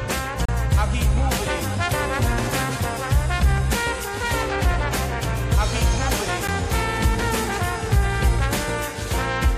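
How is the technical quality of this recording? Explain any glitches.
The music is interrupted twice by gaps between stream segments. The first gap runs from 0.45 to 0.49 s and lasts about 32 ms. The second is a brief 9 ms hole at 6.48 s. In each case the sound cuts out abruptly and resumes with hard edges. The timing of consecutive 2-second segments doesn't quite line up, so the player fills the gap with silence, and no audio is lost. A waveform shows flat, near-silent stretches, and a spectrogram shows thin, empty vertical columns.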